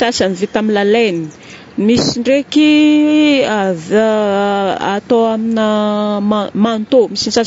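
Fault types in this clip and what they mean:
Low-delay AAC compression: The speech sounds rough and grainy throughout, with noise filling the gaps between harmonics and a thin, synthetic top band. The likely cause is a low-delay AAC codec such as AAC-ELD, whose short frames resolve pitch poorly. The plainly audible damage fits about 32 kbps.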